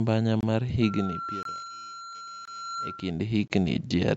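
At 0.41, 1.43, 2.45 and 3.48 s the speech drops out for about 23 ms each time. This is a gap between chunks: the audio was delivered in 1.0 s pieces, and silence was inserted at each join rather than any sound being lost. It is heard as brief, hard-edged holes recurring once a second. On a waveform each shows as a flat line with abrupt edges. On a spectrogram each is a narrow, full-height blank stripe.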